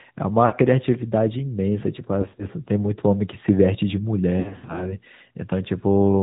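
AMR narrowband mobile codec, throughout the clip: the speech has passed through the 2G/3G mobile speech coder, so nothing above 4 kHz survives and the voice is rebuilt from a vocal-tract model excited by sparse pulses. The damage is plainly audible: a buzzy, synthetic edge to the speech. The degree of coarseness fits a mid-rate mode of around 10.2 kbps, where too few bits are left to shape the excitation naturally.

Lost AMR speech frames, at three points. Frames were corrupted in transmission, and the decoder filled each gap by repeating the last good pitch and vocal-tract settings at falling gain. From 0.46 to 0.54 s, a 60 ms gap, about three frames' worth, produces a brief smeared, held patch. From 2.22 to 2.46 s, 80 ms of losses are scattered over 160 ms, with no run longer than 40 ms, giving a short stuttering warble. The worst stretch runs from 4.40 to 4.98 s, where 240 ms is lost across 360 ms and the longest run is 80 ms. 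The sound there is repeatedly drawn out and dips in level, and the speech comes back weak or rough between the gaps.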